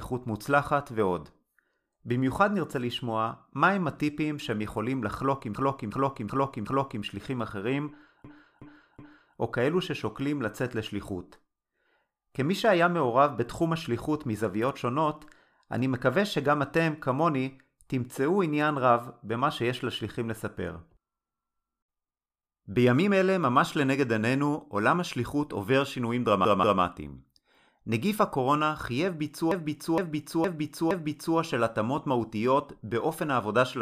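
Repeated frames stutter the speech at 5.55 to 7.04 s, 8.25 to 9.36 s, 26.45 to 26.82 s and 29.51 to 31.37 s. Each time, a block of compressed frames replays. Blocks last 186 to 464 ms. They repeat two to four times. The audio grows longer.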